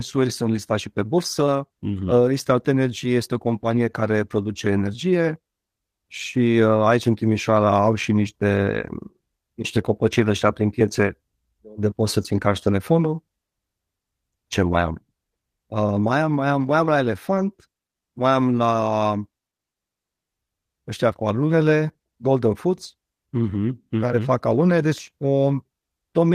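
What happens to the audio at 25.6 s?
Nothing goes wrong at 25.6 s; the speech carries on intact through that moment with no dropout, click or distortion.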